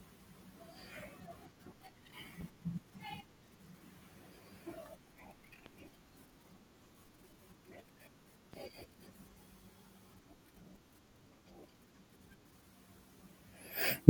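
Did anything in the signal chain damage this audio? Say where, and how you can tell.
Yes. A transient voltage step, likely from a plug, switch or static discharge in the analogue wiring ahead of the converter, was added to the signal three times, at 2.41–2.44 s, 5.66–5.70 s and 8.53–8.57 s. Each shows up as a single loud pop riding on top of the speech, which continues underneath. The strongest pop, at 5.66 s, sits around 20 dB above the speech, and the other two are about 10–15 dB above it.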